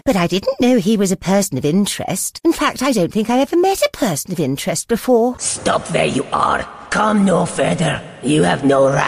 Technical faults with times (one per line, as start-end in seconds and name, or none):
none